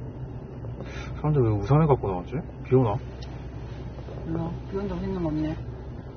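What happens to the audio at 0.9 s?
At 0.9 s the sound is dull and smeared, with a fizzy, warbling texture. This runs through the whole clip. Nothing is heard above 6.3 kHz. The likely cause is AAC compression, which fits a low bitrate near 24 kbps cutting the top band and starving the rest.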